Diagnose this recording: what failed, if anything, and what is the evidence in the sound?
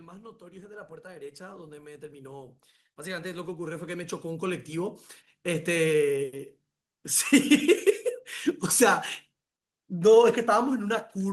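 Automatic gain rising in the call processing: from 0.38 to 2.1 s and 3.02 to 5.94 s, speech and background swell together by about 8 and 10 dB, seen as a ramping waveform envelope.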